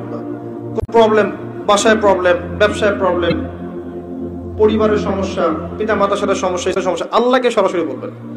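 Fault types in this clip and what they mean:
Damaged data in a compressed stream: brief chirps or squawks interrupt the audio at 0.77 to 0.89 s, 3.29 to 3.32 s and 6.70 to 6.77 s, because corrupted bytes in the encoded stream made the decoder misread frames and lose sync until it found the next valid frame.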